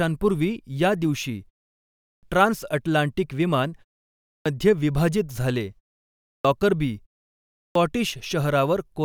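Four times the speech comes back from a pause with its start missing, a clipped start after a pause, at 1.92 s (after "या दिवशी"), 4.09 s (after "ट्रान्सअटलांटिक विमान"), 6.12 s and 7.43 s. The output seems to doze during each gap and takes roughly 0.3 to 0.37 s to wake. The opening sounds get chopped off, so each phrase snaps in abruptly out of silence.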